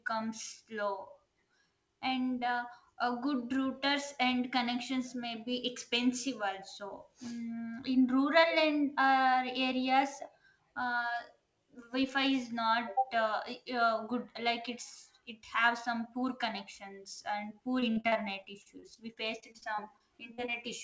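From 17.80 s to 20.54 s the speech breaks into repeated packet loss (robotic sound): some twenty short holes, none longer than 45 ms, are each patched by stretching the preceding sound, so roughly 15% of that stretch is filler, heard as choppy speech against a wideband call band that stops at 8 kHz.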